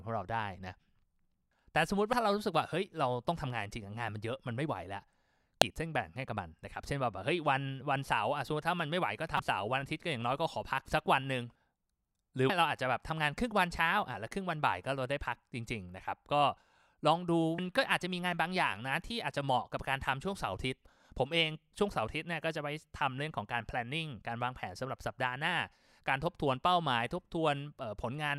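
Five little glitches of damaged data in the compressed stream run through this speech: very short blips at 2.13 s and 5.62 s, longer glitches from 9.36 to 9.40 s and from 12.46 to 12.50 s, and another quick blip at 17.58 s. Each time, a stretch of the encoded bytes is corrupted, so the decoder misreads those frames, loses its place, and hunts for the next valid frame header. That brief garbled output is the glitch you hear.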